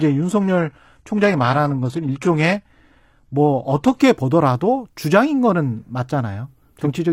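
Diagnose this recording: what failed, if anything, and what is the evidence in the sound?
Network and playback stage: an adaptive stream starting at a low bitrate. From 0.0 to 4.0 s the treble is synthetic, with nothing above 12.3 kHz and stronger codec artefacts, fitting HE-AAC near 16 kbit/s. At 4.0 s the spectrogram fills in abruptly, without a waveform gap, as the player steps up to something like AAC-LC at 96 kbit/s.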